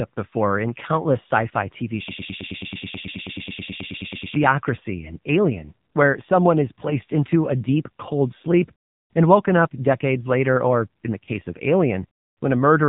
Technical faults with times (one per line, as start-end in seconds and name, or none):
0.00-12.89 AMR narrowband mobile codec